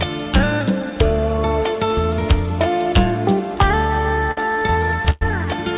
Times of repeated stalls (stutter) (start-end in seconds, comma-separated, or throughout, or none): 3.88-5.23